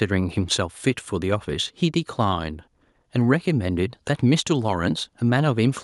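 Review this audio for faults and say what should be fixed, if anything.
Nothing stood out on listening, so there is nothing here to fix.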